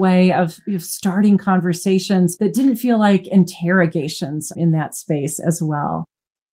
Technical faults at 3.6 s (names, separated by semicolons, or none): none